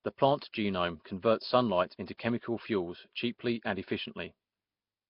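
From start to finish the speech carries a rough, hissy halo and a smeared, underwater quality, with heavy codec damage that points most likely to Nellymoser compression at a rate near 22 kbps. Weak bands are filled with noise, and a spectrogram shows grainy patches and nothing above 5.3 kHz.

At 2.18 s, just before "fuels cheaply and", a pre-echo appears. Quantisation noise from that block spills about 17 ms ahead of a sharp onset, producing a brief hiss and a softened attack, seen as a faint broadband smear preceding the waveform's rise.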